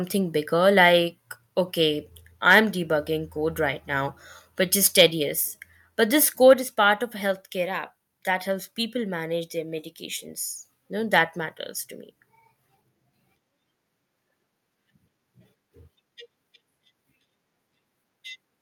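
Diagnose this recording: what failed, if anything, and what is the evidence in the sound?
Microphone overload at the converter: harsh crackle on the loudest peaks from 4.98 to 5.02 s and 6.50 to 6.52 s, with input about 4 dB then about 1 dB over full scale, flattening a few percent of samples. Likely too much input gain. Unlike codec distortion, the crackle appears only on the peaks.

Microphone volume stepped down in call processing: sudden level drops at 5.34 s (about 1 dB) and 6.54 s (about 4 dB), each just after a clipped peak. This is likely automatic gain control reacting to the overload. Unlike a compressor, voice and background drop together in one step and stay down.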